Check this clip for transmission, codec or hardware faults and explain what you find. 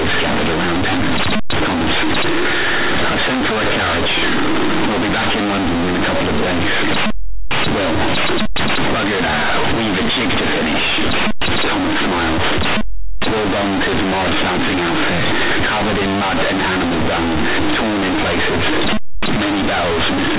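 The clip has one fault, present throughout: companded audio read as linear. Mu-law telephone bytes play as raw 8-bit samples, so quiet passages become as large as loud ones, giving loud buzzy distortion and heavy noise in pauses.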